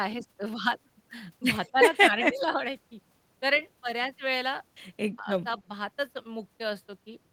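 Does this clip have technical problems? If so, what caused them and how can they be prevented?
Yes. Speech suppressed in double talk: the speech dips at 1.72–1.76, 2.29–2.57, 5.18–5.38 and 5.59–5.71 s, by roughly 5 to 20 dB. The likely cause is an echo canceller that attenuated the near talker while the far side spoke. Using headsets or better canceller double-talk detection prevents it.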